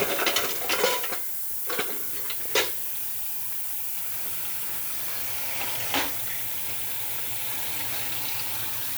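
Sounds run through the whole clip under a steady, thin hiss that climbs sharply toward the top of the band, the signature of low bit depth with noise shaping. The audio appears quantised to about 5 bits, with the rounding error fed back so that it is pushed upward in frequency. The noise sits only a few decibels below the sound itself. On a spectrogram this appears as a constant noise floor that brightens steeply toward the highest frequencies. On the waveform, a fine fuzz covers every part of the trace.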